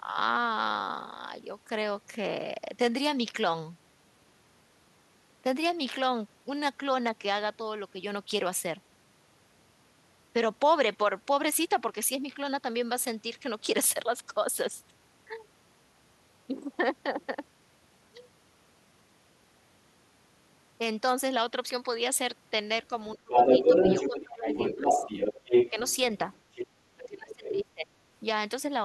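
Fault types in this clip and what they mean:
Speech suppressed in double talk: the talker's speech ducks in four places, at 23.15 to 23.32 s, 23.69 to 24.85 s, 25.71 to 25.76 s and 26.96 to 27.93 s, dropping by around 30 dB at worst. This is likely an echo canceller attenuating both voices when it cannot separate them.
Other side's voice leaking through: a second voice is audible from 23.31 to 26.67 s, about 5 dB louder than the talker, and again more faintly, about 10 dB below, from 27.06 to 27.49 s. This is likely loudspeaker echo that the canceller failed to remove.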